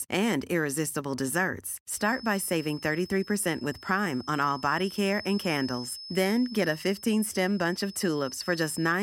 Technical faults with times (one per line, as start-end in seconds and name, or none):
1.89-9.02 feedback whistle